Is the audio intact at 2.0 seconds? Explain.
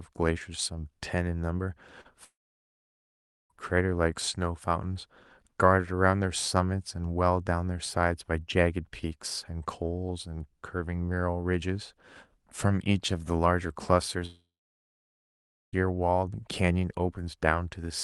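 No. From 2.01 to 2.07 s the sound briefly smears and wobbles. This is short concealed packet loss: about 40 ms of the call arrived too late to decode, so the receiver extended the preceding sound for 32 ms and then blended back into the real audio.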